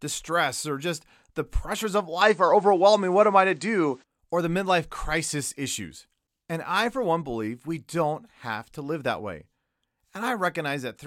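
From 2.21 s to 4.04 s the speech abruptly loses its top end, with nothing above 9.1 kHz. The level shifts by roughly 5 dB and a faint new background noise sits well below it. Then it snaps back. This points to an input switched to a poorer device, likely, with no gap at either switch. The change in noise floor and level, not just the missing highs, separates it from a simple low-pass filter.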